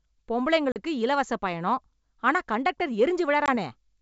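At 0.72 to 0.77 s, just before "இலவச பயணம் ஆனா கண்டக்டர்", and 3.46 to 3.49 s, right after it, packet loss on an ADPCM call cuts 40 ms (about two packets), then 20 ms: sharp-edged silent gaps on the waveform, blank spectrogram columns, then brief, slightly distorted speech while the decoder's predictor resynchronises.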